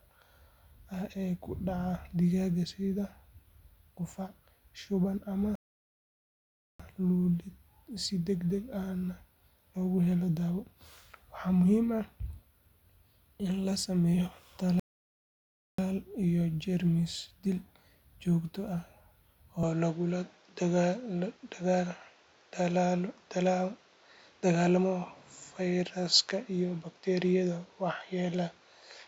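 At 5.55 s, right after "qufac shuban ama", the speech halts in a rebuffering stall: the player has run out of downloaded audio and waits, adding 1.24 s of silence before picking up exactly where it stopped, with nothing skipped. A second stall follows "in la sameeyo" from 14.80 to 15.78 s, adding 0.99 s. On a waveform each appears as a flat gap with clean edges; on a spectrogram, a blank vertical band.

From 19.63 s to the end the sound turns duller with no break and no jump in loudness, most likely because the input switched to a poorer device. Content above 7.6 kHz disappears, and a new noise floor sits roughly 35 dB below the speech. A spectrogram shows the upper band going empty at that moment, with a faint, steady haze underneath.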